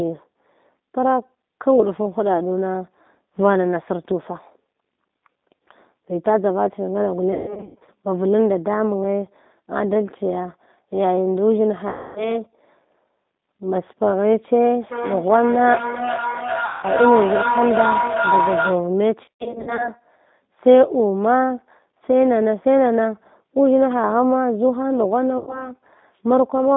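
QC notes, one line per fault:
Throughout: G.729 codec. Sound is squeezed into about 200 Hz to 3.7 kHz and rebuilt from a coarse speech model. That gives a plainly rough, synthetic edge.
7.33–7.89 s, 11.89–12.41 s, 16.65–16.85 s, 19.25–19.91 s, 25.38–25.72 s: VoIP packet loss concealed by the speech codec. The decoder stretches the last sound into fading buzz. Gaps run from 90 to 360 ms.
14.75–18.95 s: feedback howl. A loop between two devices on the call builds a tone around 1 kHz. Its repeats come roughly every 0.4 s and it peaks within about 1 dB of the speech.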